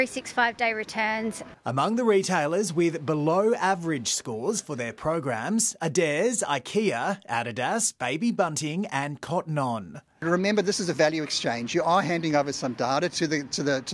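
No technical faults are audible anywhere in this audio.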